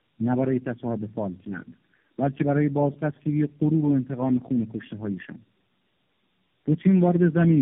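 From start to finish the speech sounds rough, muffled and warbly, with nothing above about 3.8 kHz. This is tandem speech coding: the signal appears to have been decoded and re-encoded at several network borders, probably through about three AMR-NB stages at a low rate, with telephone-band links between them. Each coder works on the previous coder's already degraded output, so the roughness and smearing compound into something worse than any single link would produce.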